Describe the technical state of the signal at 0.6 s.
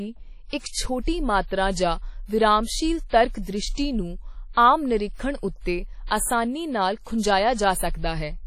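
A short breath of hiss runs ahead of the speech attack near 0.6 s, from 0.58 to 0.64 s, and the onset itself sounds softened and smeared rather than crisp. This is pre-echo: the codec spreads its quantisation noise across the whole transform block, so when a sharp attack lands late in that block, noise sized for the loud part also fills the quiet 54 ms before it, arriving before the sound that caused it.

Underneath, the speech carries a washy, ringing quality, and the hiss swells and fades with the signal, with nothing present above 16.5 kHz. This is heavy damage that likely comes from WMA compression. Long transform blocks smear coarse quantisation noise over tens of milliseconds, and weak spectral lines are dropped to zero, leaving a thinned, watery texture. The amount of damage points to a low bitrate of around 32 kbps.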